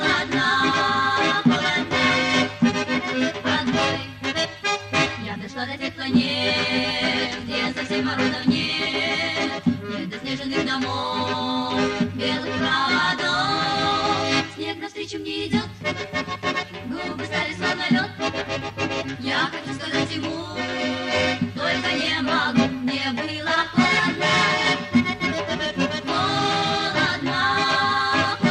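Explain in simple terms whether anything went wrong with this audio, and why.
Nothing went wrong here.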